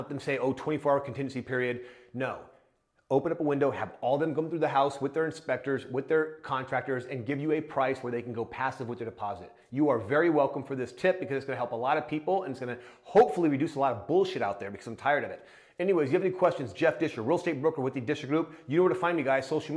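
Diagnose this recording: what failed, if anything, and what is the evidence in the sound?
Nothing stood out on listening that points to a failure at any stage of the chain.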